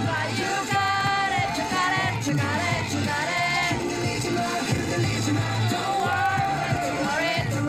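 Periodic USB or driver dropouts run from 0.11 to 7.60 s, with a tiny gap of silence, around half a millisecond, every 64 ms, so you get steady ticks through the sound.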